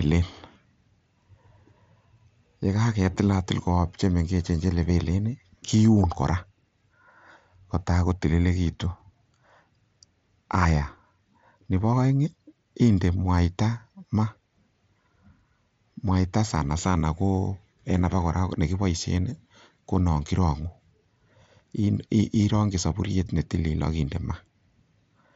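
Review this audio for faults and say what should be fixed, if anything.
Nothing here needs fixing: the speech arrives through a wideband Bluetooth mSBC headset link that passes content up to 8 kHz, with only the light graininess on louder moments that this codec normally leaves.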